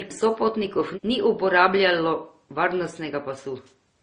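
Speech runs the whole clip with transcoding between lossy codecs, likely a low-rate MP3 followed by Opus: the artefacts of both codecs are heard together. Hearing two distinct artefact types together distinguishes it from a single codec, and nothing remains above about 19.7 kHz.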